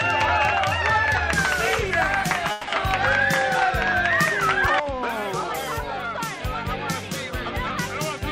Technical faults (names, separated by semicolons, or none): call audio freeze